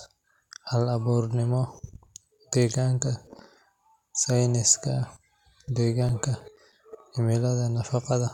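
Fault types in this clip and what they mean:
CD scratch ticks: a blemish on the disc destroys more data than error correction can rebuild, once per revolution, so the player patches over or mutes a few milliseconds of sound on each turn. Here it appears as two bursts, 1.59 to 3.01 s and 5.77 to 7.04 s, each a run of short ticks spaced at about seven per second. That steady, rotation-locked spacing separates it from dust clicks or random digital glitches, which fall at irregular intervals.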